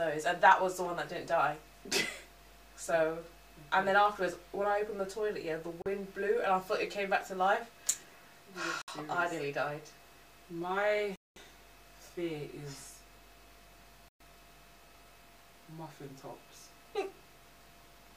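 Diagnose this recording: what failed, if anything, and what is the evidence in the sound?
Dropped samples at 4.06 s: a single sharp click, a thin vertical line across the spectrum. At the driver or buffer stage, a couple of samples likely went missing, so the waveform jumps straight to a later value. The gap is far too brief to remove any sound.

Bluetooth stalls at 5.82 s (38 ms), 8.82 s (63 ms), 11.16 s (205 ms) and 14.08 s (119 ms): the sound cuts to silence, then resumes. At the playback stage, interference likely delayed packets, the headphones' buffer ran dry, and output paused until the resent packets arrived.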